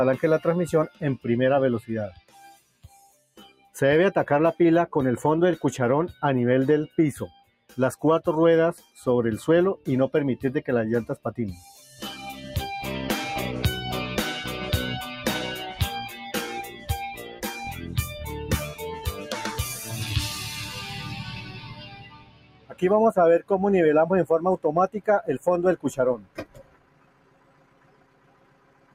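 Throughout, a noise suppressor applied to music or sounds, tuned for speech, keeps judging sustained material to be noise. It turns held parts down while letting attacks through, so the level swings by around 20 dB and the sound pumps, flutters or thins. A gate or compressor would follow overall loudness. Here the dips track how steady the sound is, and onsets mostly get through while the body beneath them sinks.

Sound cut by the noise suppressor shows up at specific spans. At 2.11–3.75 s it drops by about 17 dB for roughly a second and a half. At 7.3–7.78 s the drop is about 17 dB, at 8.77–8.99 s about 13 dB, and at 11.75–11.99 s about 5 dB. At 16.67–18.28 s it is about 10 dB for around a second, and at 18.72–19.32 s about 10 dB. At 20.46–22.82 s it drops by about 17 dB for some two seconds, and from 26.17 s to the end by about 17 dB for roughly three seconds. In each span, the sound is turned down rather than dropping out abruptly, which sets this apart from a transmission dropout.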